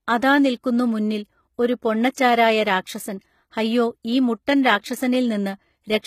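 A speech clip whose upper range sounds bright yet synthetic throughout: s sounds come across gritty and metallic, with a lisping edge, and nothing is present above about 14.9 kHz. This is likely HE-AAC compression, which fits HE-AAC v2 at a low bitrate around 20 kbps. The codec carries only the lower spectrum and rebuilds the treble by copying those bands upward under a coarse envelope, so the rebuilt harmonics no longer line up with the real ones.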